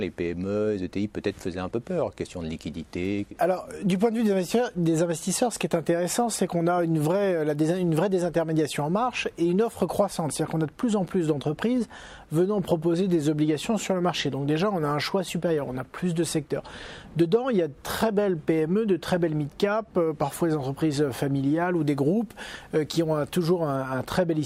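From 21.76 to 23.76 s, pre-emphasis is left on. The CD 50/15 µs treble boost goes uncorrected, lifting 10 kHz about 8 dB. It sounds thin, bright and sibilant.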